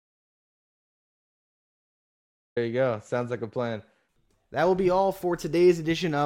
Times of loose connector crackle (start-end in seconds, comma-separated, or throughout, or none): none